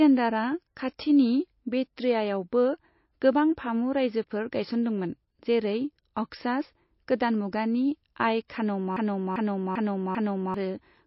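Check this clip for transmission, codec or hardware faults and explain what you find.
Three faults are audible: codec damage throughout, two pre-echoes, and a looping stall near the end.

MP3 compression is the likely cause of damage across the whole clip. Nothing remains above 5.6 kHz, and weak spectral lines drop in and out between frames, giving a watery, swirly texture on the speech. The degree of damage fits a low bitrate of around 27 kbps.

Pre-echo occurs at 1.96 s and again at 8.48 s. In both places a sharp onset falls late in a transform block, so quantisation noise scaled for the loud attack spreads back over roughly 11 to 12 ms of quieter signal before it. This is heard as a brief hiss ahead of the attack, which itself sounds softened.

A broken-record loop runs from 8.96 s to 10.54 s. A 0.39 s fragment repeats back to back four times, exactly identical each pass. This is likely a stall in the player or stream that kept resending its last buffered piece, and the audio that should have filled that span is lost.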